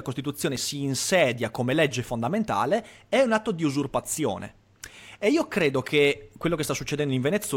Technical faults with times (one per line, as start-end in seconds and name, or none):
0.56 block of digital silence